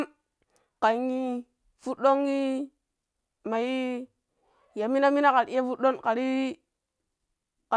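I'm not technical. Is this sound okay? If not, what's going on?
Yes, this recording sounds fine. There are no technical problems to point out anywhere in it.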